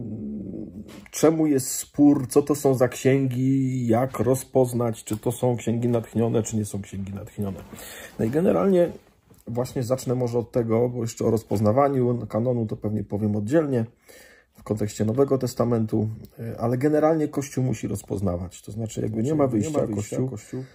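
A doubled audio track enters abruptly at 19.07 s and lasts to the end. A full-band copy, about 5 dB quieter, trails by roughly 400 ms with no decay or room colour, likely because a slower path captured the signal a second time.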